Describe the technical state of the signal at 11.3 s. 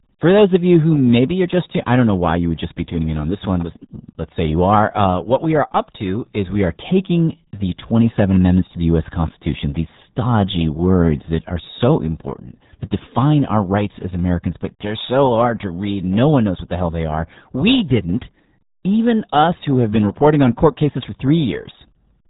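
At 11.3 s the speech carries RealAudio 14.4 codec damage, present throughout the clip: heavy low-rate coding, consistent with an 8 kbit/s dial-up codec, leaves it muffled and gargly. A spectrogram shows energy ending abruptly at 3.8 kHz, with smeared, blocky harmonics beneath.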